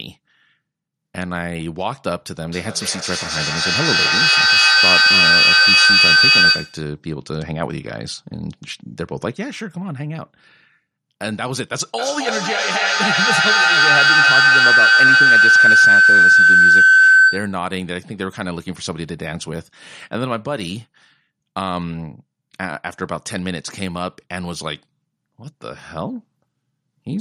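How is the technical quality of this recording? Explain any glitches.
The recording has two serious acoustic feedback problems, both from a loop between two devices picking up each other's sound.

From 2.43 to 6.96 s there is feedback echo between two devices. A second device replays what one microphone sent, and that microphone captures it again, beyond its own echo canceller's reach. The speech returns roughly every 300 ms, thinning and ringing, and the repeats stack up to about 11 dB above the speech.

From 11.98 to 17.69 s the same kind of loop turns into a feedback howl. The loop gains level on each round trip, so the sound narrows to a tone near 1.5 kHz, peaking about 13 dB above the speech.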